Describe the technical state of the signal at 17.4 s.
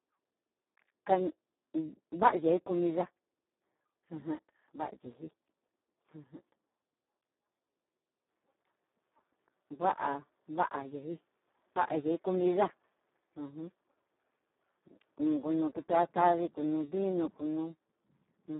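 At 17.4 s the speech is under the Speex codec damage that runs through the whole recording. Starved of bits for the excitation signal, the CELP model rebuilds the voice hoarse, buzzy and close to robotic, which fits a rate near 4 kbps. The band sits at 200 Hz to 3.7 kHz with nothing above 3.9 kHz. Unlike plain telephone band-limiting, the harshness lies in the voice itself rather than only in the missing treble.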